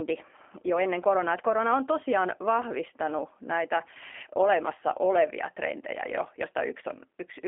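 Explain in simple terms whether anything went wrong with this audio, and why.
G.729 codec damage runs through the whole clip, from start to finish. The speech was squeezed through a low-rate phone codec that doesn't send the actual sound wave. It sends a rough description of the mouth's shape, the pitch and a few pulses, and the far end rebuilds speech from that. Everything above about 3.4 kHz and below about 250 Hz is gone, so the speech sounds thin and boxy, and the rebuilt sound is plainly rough and slightly artificial.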